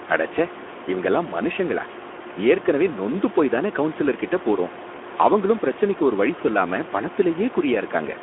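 Throughout the clip, Speex codec damage is plainly audible. Low-rate CELP coding, consistent with roughly 11 kbps, leaves the speech hoarse and grainy within a narrow 250 Hz to 3.4 kHz line band. A spectrogram shows smeared harmonics and empty space above 3.8 kHz, with room noise about 14 dB below.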